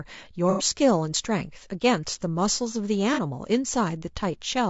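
Throughout the speech, the sound is rough and grainy, with noise filling the gaps between harmonics and a thin, synthetic-sounding top band. This is likely low-delay AAC compression (AAC-ELD) at around 32 kbps, where short frames resolve pitch detail poorly.

AAC frame loss with concealment occurs from 0.50 to 0.64 s, a gap of about 90 ms that fits three lost frames, and again from 3.14 to 3.19 s, about 30 ms. In each, the decoder rebuilds the audio from the last good spectrum, leaving a smeared, noisy patch.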